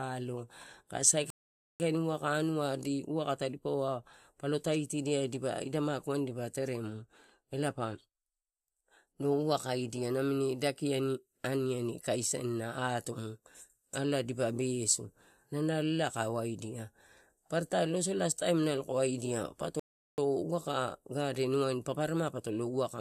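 At 1.30 s and again at 19.80 s the speech halts in a rebuffering stall: playback outran the download, inserting about 0.50 s and 0.38 s of silence before resuming seamlessly.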